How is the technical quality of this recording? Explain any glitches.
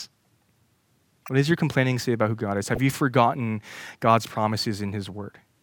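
The speech has two short decoding glitches. Corrupt frames were decoded at 1.26–1.29 s (roughly one frame) and 2.71–2.78 s (roughly three frames). Flipped bits in the compressed data were played anyway, so misread gains and codes put energy at the wrong frequencies. The result is a brief chirpy burst peaking near -25 dBFS, then near -20 dBFS.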